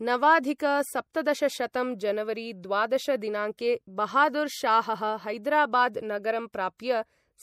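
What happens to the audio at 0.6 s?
At 0.6 s the speech carries the same MP3 compression damage heard across the whole clip: a watery, swirling texture and smeared consonant onsets. The cause is likely an encoder starved of bits, consistent with roughly 64 kbps, cutting the treble and switching weak frequency lines on and off between frames.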